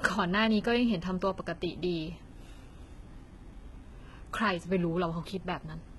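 Heavy low-bitrate HE-AAC compression is the likely cause of the damage throughout this speech clip, at a rate that fits roughly 16 kbps. The treble is rebuilt from copied lower bands, so sibilants sound gritty and metallic, and nothing survives above 11.8 kHz.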